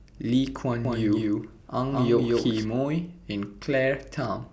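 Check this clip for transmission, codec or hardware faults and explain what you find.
One fault is audible. Doubled audio track, 0.85 to 2.65 s: a slower second capture path likely adds an equally loud, dry copy about 200 ms behind, cutting in and out abruptly.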